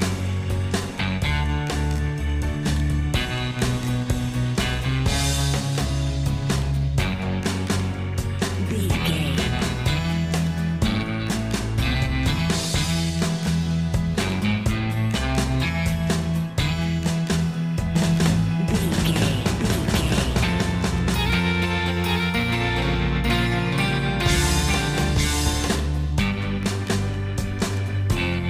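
From 17.95 s to 25.75 s the audio is doubled: a full-band second copy runs about one second behind, at roughly the same level, with no decay or room colour, and begins and ends abruptly. This is likely a second capture through a slower path.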